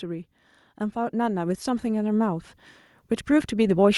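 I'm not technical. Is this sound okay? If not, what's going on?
No. From 0.93 to 2.54 s, automatic gain rising: the recorder turns itself up gradually, so the voice and background noise swell together, unlike a speaker simply moving closer.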